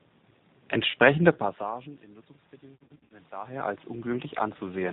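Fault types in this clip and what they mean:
G.729 codec: The speech is band-limited throughout, with nothing above 4 kHz, and has a plainly audible rough, synthetic edge. This fits an 8 kbit/s codec that rebuilds the voice from a filter, a pitch predictor and sparse pulses. Unlike packet loss, it never lets up.
VoIP packet loss concealed by the speech codec: At 0.91 to 0.95 s, a gap of about 30 ms is bridged by a stretched continuation. From 2.75 to 3.14 s, scattered losses of up to 60 ms each make the voice weaken and fade. This comes in bursts, unlike the steady codec roughness.
automatic gain rising: From 2.6 to 4.88 s, the voice and the background swell together by about 9 dB, compensating for a quieter input. The room noise rising along with the voice separates this from the talker moving near 3.5 s, where only the voice changes.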